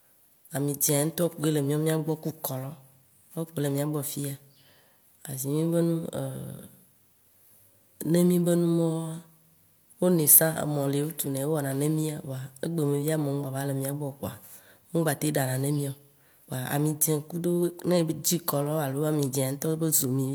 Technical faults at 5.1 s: none

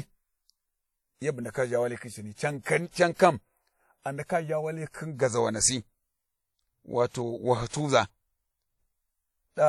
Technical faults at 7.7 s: WMA compression; pre-echo

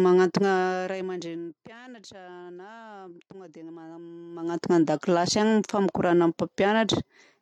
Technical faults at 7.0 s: none

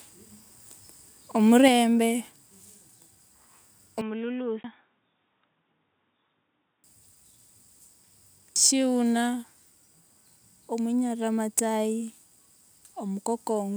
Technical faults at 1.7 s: microphone volume stepped down

